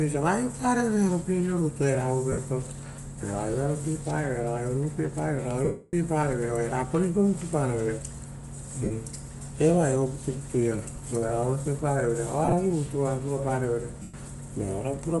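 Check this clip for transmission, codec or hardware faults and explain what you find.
Two faults are audible: a constant codec coloration across the whole speech clip, and five short dropouts where the stream briefly breaks up.

Bluetooth LC3 compression, throughout. The upper spectrum sounds thinned and refilled with noise, giving the speech a breathy, grainy edge that is plainly audible from start to finish. This is likely the LE Audio LC3 transform codec working at a modest rate: the degree of damage fits roughly 48 kbps with 7.5 ms frames. At that rate, the encoder zeroes high-frequency bands and the decoder substitutes synthetic noise.

Lost LE Audio frames, at 2.32 s (52.5 ms), 5.65 s (about 290 ms, ending just before "vere oia rapa ruipa"), 8.84 s (67.5 ms), 12.45 s and 14.02 s (112.5 ms). When frames fail to arrive, the decoder repeats the last spectrum with randomised signs, so each gap turns into a noisy smear rather than clean silence. 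In the longest gap, at 5.65 s, that smear fades away gradually. The 12.45 s event is scattered over 75 ms, with the longest single run around 30 ms.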